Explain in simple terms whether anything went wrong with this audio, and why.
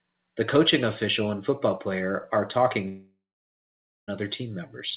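Right after "football player are talking", from 2.88 to 4.10 s, the sound breaks into a fading buzz, then about 0.9 s of near-silence. This is likely a long network dropout: about 1.2 s of audio never arrived, and speech resumes without it.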